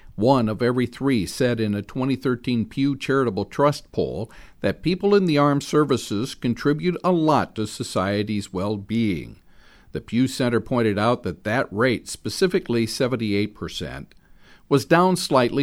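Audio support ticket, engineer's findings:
No faults found on listening to this speech recording. No working path to report on, and no action needed on the audio side.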